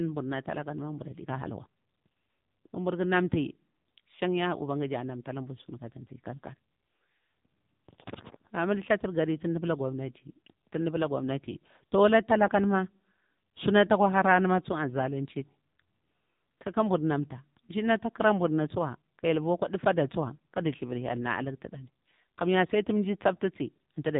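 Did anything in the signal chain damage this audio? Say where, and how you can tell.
Yes, AMR narrowband mobile codec damage throughout, at the codec stage. The speech stops dead at about 3.8 kHz and sounds buzzy and synthetic, as a few excitation pulses per 5 ms subframe drive a vocal-tract model. The heavy damage fits a low mode near 6.7 kbps.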